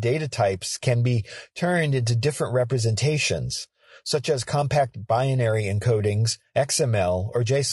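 From start to finish the speech sounds rough and grainy. The damage is plainly audible. Noise fills the gaps between the pitch harmonics, so the voice loses its clean, tonal core. The top band sounds dull and synthetic. This points to low-delay AAC compression, likely AAC-ELD, the codec of video calls. It fits a bitrate around 32 kbps. Its short frames cannot separate the harmonics finely, and at this rate too few bits remain for detail.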